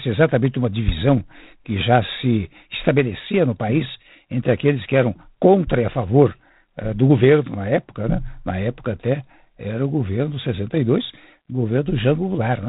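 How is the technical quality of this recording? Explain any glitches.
The technical quality is limited by one fault that runs through the whole recording. G.726 ADPCM coding holds the speech to a telephone band and adds a harsh, rasping hiss that rises and falls with the speech level. Each sample is coded as a coarse difference from a running prediction, and the roughness points to 24 kbit/s. On a spectrogram, energy stops sharply at 3.8 kHz, with grainy noise filling the band beneath.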